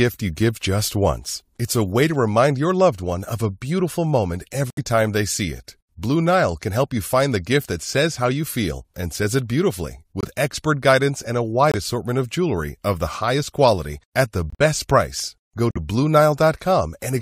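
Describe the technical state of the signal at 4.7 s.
At 4.70 s a run of compressed frames arrived with corrupted bits, the decoder rejected them, and the player muted what it could not decode: a corrupt frame muted fault. The speech drops to abrupt silence until 4.79 s, a gap of about 88 ms that points to three frames lost, with timing preserved.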